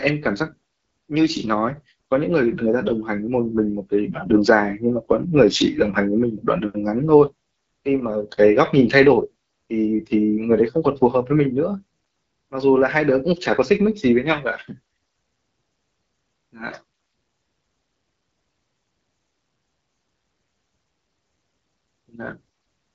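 From start to finish the speech sounds rough and raspy, with a hissy top above about 6.4 kHz. This is AMR wideband (HD Voice) codec damage, and the coarseness fits one of its lowest modes, around 8.85 kbit/s.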